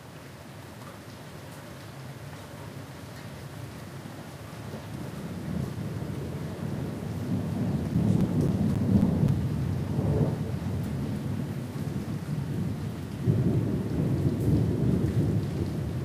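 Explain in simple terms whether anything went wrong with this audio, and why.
Yes, something went wrong: between 7.67 and 9.55 seconds there are CD scratch ticks, eight short ticks at a steady pace of about four a second, the longest about a hundredth of a second long. A disc blemish passing once per turn causes them. Their even rhythm sets them apart from random crackle.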